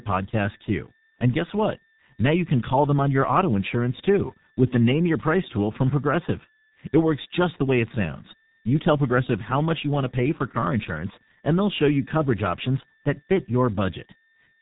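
Throughout, heavy G.723.1 codec damage leaves the speech muffled and hoarse, nothing above 3.8 kHz, with smeared consonants from slow 30 ms frame updates, unlike a plain low-pass filter.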